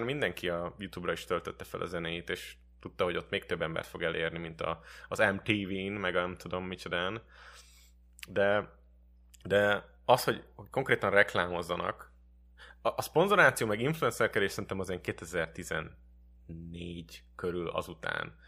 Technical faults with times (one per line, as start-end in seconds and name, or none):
0.00-18.48 mains hum